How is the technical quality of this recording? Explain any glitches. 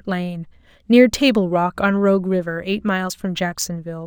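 The speech has a dull top end with a faint metallic shimmer on sibilants, and this runs through the whole recording. It is imaging from linear upsampling. The rate was raised by joining samples with straight lines, which points to a conversion from about 22 kHz to 44.1 kHz. That crude filter softens the highest frequencies and leaves mirror copies of the spectrum between about 11 kHz and 22 kHz, roughly 30 dB below the speech.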